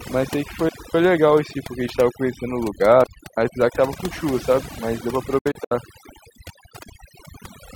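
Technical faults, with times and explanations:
Throughout: overdone noise removal. The noise reduction was set so hard that any frequency band sitting near the estimated noise floor is pulled far down or switched off, and the quieter parts of the speech are cut along with it. Between phrases the background drops to near silence sprinkled with twinkling specks. A spectrogram shows a blank, dark floor dotted with isolated bright flecks, and speech harmonics with ragged, eaten-away edges.
0.69 to 0.95 s and 3.04 to 3.37 s: digital wireless dropout, twice. Each time the wireless link lost too much data and the receiver muted with a very short fade. The first hole lasts about 255 ms and the second about 335 ms. Both are clean gaps of near silence with no crackle or burst of noise on either side. The waveform flattens almost to zero and then resumes, and the spectrogram shows clear vertical blank bands across all frequencies.
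5.38 to 5.72 s: digital broadcast dropout. The receiver lost the digital signal, or its frames failed their checks, and it muted until good data returned. About 160 ms of audio is missing, split into several short holes over a span of roughly 320 ms. The longest hole is about 64 ms, and five frames are lost in all. Each cut fades out in about 8 ms. The waveform shows a cluster of brief flat gaps, and the spectrogram shows narrow, repeated vertical blanks.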